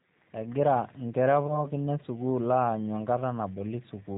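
Speech coded throughout with the G.729 codec at 8 kbit/s, and the damage is plainly audible: nothing above 4 kHz survives, and the voice sounds rough and slightly synthetic because it is rebuilt from a filter, a pitch predictor and a few pulses per frame. A plain narrowband telephone filter would only dull the sound, without adding that buzzy roughness. From 1.47 to 1.68 s there is VoIP packet loss concealed by the speech codec. About 20 ms of audio is missing, which fits one lost packet, but there is no silent gap or click as a hard dropout would leave. Instead, the decoder stretches the last sound into a buzzy tone or coloured noise that fades, and the voice stays weak or distorted for tens of milliseconds or more while its frame-by-frame prediction recovers.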